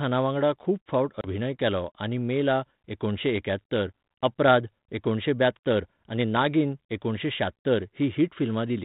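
At 1.21 s a few packets of this speech are lost on an ADPCM call, and about 30 ms of audio is replaced with silence, running to 1.27 s. Because the decoder's adaptive predictor and step size carry on without the missing data, they drift away from the sender's. The gap has abrupt edges, and when speech resumes it comes back with some distortion before settling. The G.726 coding at 32 kbit/s leaves only light coding damage around it.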